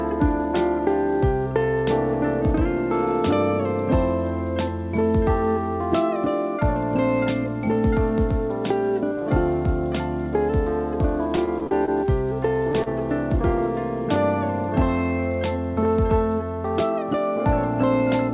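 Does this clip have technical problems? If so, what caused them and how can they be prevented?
Yes. From 11.36 to 11.91 s there is repeated packet loss, heard as choppy sound with pieces missing. Five separate holes, the longest about 32 ms, were each patched by extending the last sound, so about 98 ms was synthesized and about 30 ms is missing outright, roughly a fifth of that half-second. On a spectrogram this shows as smeared, overly regular harmonic bands in short blocks. The waveform shows repeated, near-identical cycles where the natural variation disappears. Preventing it means fixing the lossy network link, for example by moving off congested Wi-Fi or prioritising call traffic, or by enabling forward error correction.

At 12.72 to 12.77 s comes a short stall from a late packet. The network delay jumped by about 20 ms, the jitter buffer ran dry, and the receiver held the current sound for 20 ms until the packet turned up, then carried on with nothing lost. 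On a spectrogram the frequency content flattens briefly into a stretched, unchanging patch. In the waveform a steady, repetitive stretch appears where the sound should be evolving. A jitter buffer that adapts to delay swings, or a slightly larger target delay, would absorb this.

From 12.83 to 12.93 s there is a short concealed packet loss. About 30 ms of audio never arrived in time. The receiver invented 30 ms to cover the hole and then trimmed about 9 ms while blending back into the real signal, which leaves a brief smear or wobble. It appears as a short blurred slice on the spectrogram. Reducing packet loss on the link, or adding redundancy such as forward error correction, would prevent it.

Throughout, the call path cuts off everything above 4 kHz, which fits G.711 A-law at 64 kbps. On a spectrogram this shows as a hard ceiling at 4 kHz.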